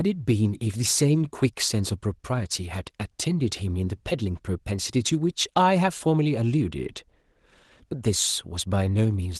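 Speech clip with no technical faults; the Opus voice compression runs in hybrid mode at 20 kbps with fullband coverage and 20 ms frames, leaving only the light coding texture expected at that rate.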